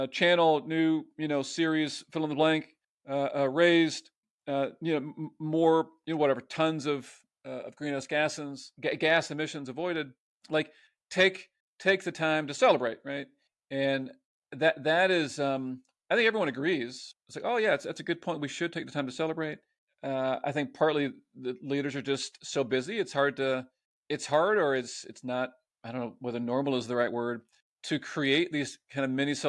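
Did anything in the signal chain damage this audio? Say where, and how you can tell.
No, nothing in the chain damaged it.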